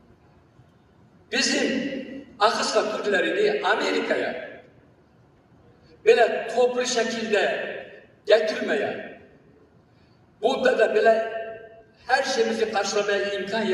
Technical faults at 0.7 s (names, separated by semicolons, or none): noise suppressor applied to music or sounds; sound cut by the noise suppressor